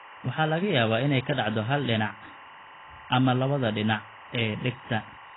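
Timecode bleed runs from start to finish: linear timecode has leaked into the speech from a neighbouring track or cable. The code is a square wave that flips between two pitches, roughly 1 kHz and 2 kHz, so it sounds like a steady chirping warble sitting behind the speech, roughly 20 dB below it. Its rhythm fits a 23.976 frames-per-second rate, so the chirp keeps an even frame-by-frame rhythm.

AAC compression damage is also present throughout, and it is heavy. Nothing comes through above 3.9 kHz, so the speech sounds dull and muffled, and sibilants lose their edge. Sustained sounds pick up a warbling, fizzy smear. The likely cause is AAC-LC coding at a very low bitrate, around 16 kbps, where the codec lowers its cut-off, leaves gaps across the spectrum, and fills some bands with substitute noise.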